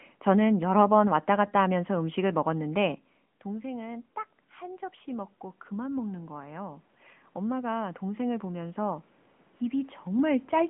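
Throughout, the speech carries AMR narrowband mobile codec damage. Nothing passes above about 3.7 kHz. The voice sounds buzzy and synthetic, which fits a mid-rate setting near 10 kbps.

From 3.44 s to 9.04 s, after "갔다 하면서 음식을 먹었는데", the automatic gain is rising. The talker moved back around 3 s, dropping the level about 16 dB. Gain then climbs about 10 dB, swelling voice and room noise together.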